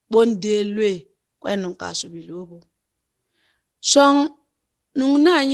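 No technical fault can be heard in this speech clip, which has come through a WebRTC call path working as expected, with the Opus codec's ordinary coding texture and a top end that stops at about 12 kHz.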